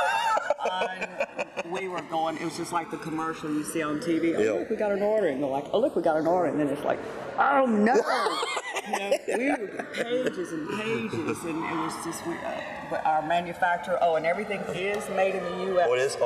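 Throughout, the channels drift apart: separate clocks about 200 ppm apart let the inter-channel delay creep to roughly 2 ms, so mono sweeps slowly one way, never cycling like a flanger.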